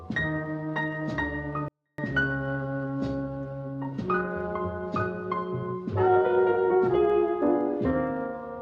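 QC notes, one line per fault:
1.68–1.98 s, 24-bit alignment error (too quiet): for this 0.3 s stretch the sound stays clean but drops by about 48 dB and all but vanishes. The samples sat in the low three bytes of each 32-bit word, but were read as full 32-bit integers, so every value shrank by a factor of 256.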